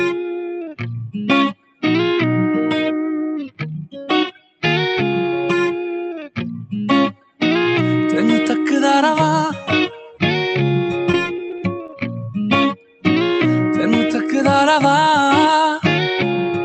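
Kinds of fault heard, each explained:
Noise suppressor applied to music or sounds: Throughout, a speech-tuned suppressor treats sustained tones and tails as noise, so level swings by about 5 dB and the sound pumps.
Sound cut by the noise suppressor: At 1.54–1.83, 4.32–4.63, 7.14–7.41 and 12.75–13.04 s, the suppressor judges sustained sound as noise, dropping it by about 16–18 dB.
Repeated packet loss (robotic sound): From 10.92 to 12.02 s, repeated dropouts, each briefly patched by extending the preceding sound, leave choppy audio with holes up to 19 ms.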